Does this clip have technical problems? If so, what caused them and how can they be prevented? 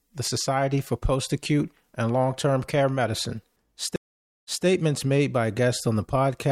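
Yes, a stream reconnect from 3.96 to 4.65 s: the connection dropped, leaving 0.48 s of silence, then a fresh decoder picked up 0.21 s earlier, just before "made by". A larger client buffer with seamless resume would prevent it.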